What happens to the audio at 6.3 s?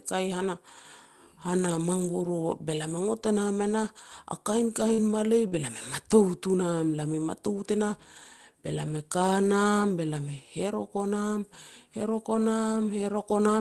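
Nothing goes wrong at 6.3 s: the speech passes through the call path intact, with no dropout, glitch or distortion at that point.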